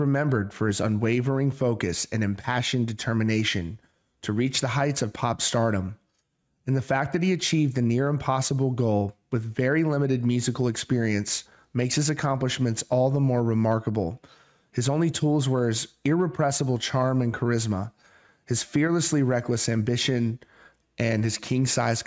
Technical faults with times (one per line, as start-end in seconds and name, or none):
none